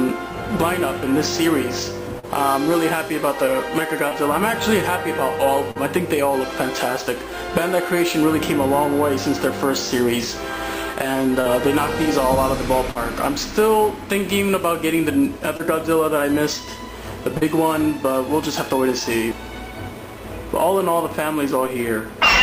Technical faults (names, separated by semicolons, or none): short concealed packet loss